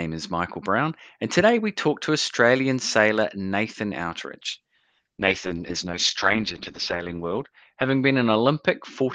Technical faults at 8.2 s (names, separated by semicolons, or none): call bitrate drop